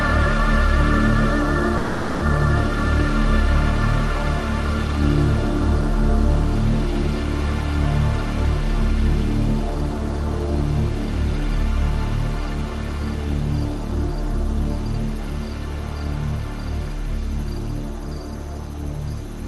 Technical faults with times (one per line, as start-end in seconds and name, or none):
1.77-2.23 long network dropout